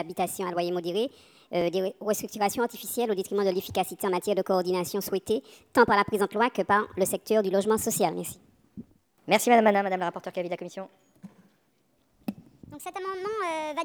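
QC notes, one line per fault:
Throughout: wrong sample rate. Everything plays 1.38 times fast and 5.55 semitones high, consistent with 32 kHz audio played at 44.1 kHz. The spectrogram shows all energy shifted upward, and the waveform looks compressed in time.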